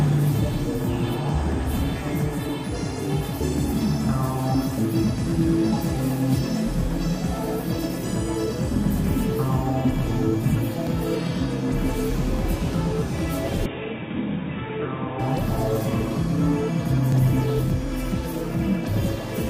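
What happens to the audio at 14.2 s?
From 13.66 to 15.19 s the sound turns dull and boxy, cut above 3.8 kHz, about 5 dB quieter, with a faint new noise floor. This is likely an input switched to a poorer device; the simultaneous band, level and noise change sets it apart from plain filtering.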